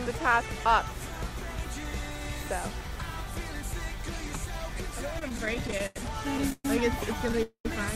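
Repeated stalls (stutter) run from 5.19 to 5.97 s: eleven brief gaps, the longest 92 ms, fill about a quarter of that stretch with continued sound. Packets arrived too slowly, so the jitter buffer kept emptying. Nothing is lost, but the audio drags and stutters.

Call audio freezes occur at 6.52–6.65 s and 7.43–7.66 s. The last sound is held and fades, into about 20 ms of silence in the first and about 100 ms in the second, before the audio resumes where it stopped. This is likely packets held up in transit, starving the jitter buffer.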